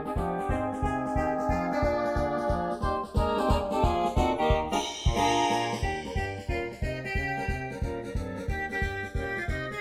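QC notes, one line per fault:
Throughout: channels drifting apart. The two channels run on clocks that disagree by something like 50 parts per million, so the offset between them grows steadily across the clip, reaching roughly half a millisecond by the end. Because the delay keeps changing, any mono fold-down produces comb-filter notches that glide slowly through the spectrum rather than sitting still. This is heard as a gradual, sweeping flange on the sound, with its frequency pattern shifting as the offset increases.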